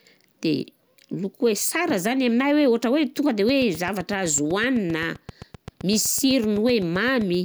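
From 3.49 s to 7.35 s a train of clicks runs under the speech: about thirty near-identical pulses at a steady 7.8 per second, peaking roughly level with the voice. It ticks through pauses too, most likely from electrical interference or a faulty connection or power supply.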